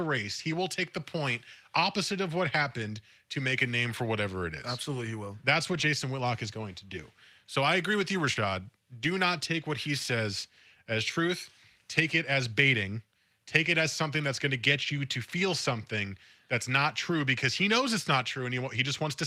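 From 5.73 to 5.79 s the sound turns briefly rough and grainy for about 40 ms, with no gap. This is a lost packet rebuilt from error correction: two separate packets likely went missing, and the decoder played the low-bitrate copies carried in the following packets. Those copies hold the speech at coarser quality, which causes the noisy texture. The same short roughness returns at 9.62 to 9.64 s and 13.66 to 13.68 s, each about 20 ms and consistent with a single rebuilt packet.

At 8.33 to 8.38 s there is a quick smear or wobble. This is short concealed packet loss: about 20 ms arrived too late or never arrived, and the receiver spent roughly 22 ms extending the preceding sound before blending back. Within that same stretch, 8.36 to 8.38 s was also rebuilt from an error-correction copy, so the end of the smear carries the same grainy roughness.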